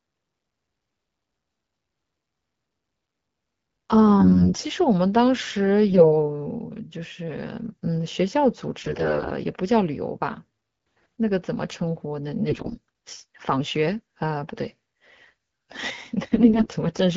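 Speech over AMR-WB, with AMR bit errors at 4.20–4.62, 5.90–6.13, 8.81–9.31, 12.48–12.77 and 16.23–16.68 s: flipped weakly protected bits misplace excitation pulses, leaving the voice hoarse and gargly, roughest at 8.81 and 12.48 s.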